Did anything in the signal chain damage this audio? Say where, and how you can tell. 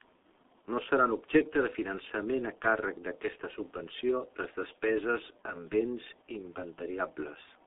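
Yes. The speech sounds muffled and hoarse from start to finish, with smeared consonants, a band of roughly 250 Hz to 3.6 kHz, and nothing above 3.8 kHz. That points to the G.723.1 codec at about 6.3 kbit/s, whose coarse 30 ms frames heavily blur the voice.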